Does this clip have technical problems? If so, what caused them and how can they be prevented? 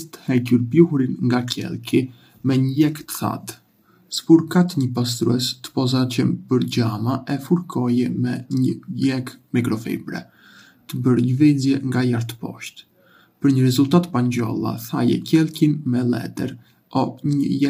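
Yes. Throughout the speech the voice sounds rough and grainy, with a hiss filling the gaps between the pitch harmonics and nothing above about 15.6 kHz. This is likely low-delay AAC compression such as AAC-ELD, at a rate that fits around 32 kbps. Its very short frames cannot separate closely spaced harmonics well and spend extra bits on that, leaving too few for clean detail. Raising the bitrate, or choosing a standard-delay codec when latency doesn't matter, would prevent it.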